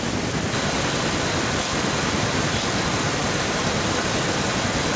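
Echo leak from 0.51 s to the end: a second copy of the speech trails the original by 915 ms, only a little quieter than it. The likely cause is a far-end loudspeaker whose echo canceller let its microphone pickup back into the call.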